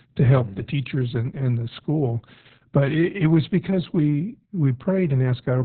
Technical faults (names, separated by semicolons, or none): Opus voice compression